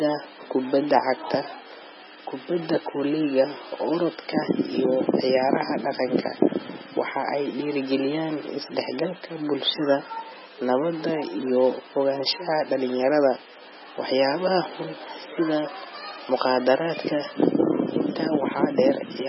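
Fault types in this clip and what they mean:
MP3 compression: the encoder likely ran short of bits, matching a very low rate near 16 kbps, so it cut the treble and dropped weak frequency lines, leaving the speech heavily dulled, watery and swirly, with smeared consonant attacks throughout.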